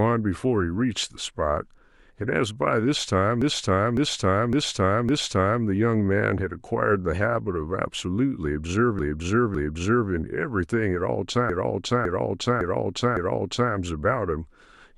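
Repeated frames stutter the speech three times: 3.42 to 5.64 s, where the same roughly 0.56 s chunk plays four extra times, then 8.99 to 10.10 s with two repeats, and 11.50 to 13.73 s with four more. The same compressed block was sent again each time, which stretches the clip by those seconds.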